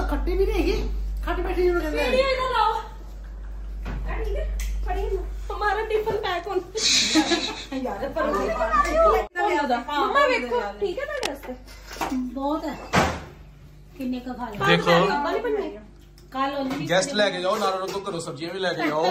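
At 11.09 s a burst of cable scratch noise begins. It lasts until 11.27 s, just under a fifth of a second. It sits roughly 10 dB below the main sound. It is heard as a short, rough scratching or crackle laid over the audio. The noise is dense and uneven, not a single click. The likely cause is a worn cable, connector or control being moved, so its contact resistance flickered rapidly.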